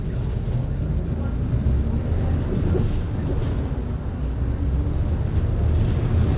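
Sounds carried over a call path, with nothing above 4 kHz, consistent with narrowband G.711 A-law coding at 64 kbps, and no faults to report.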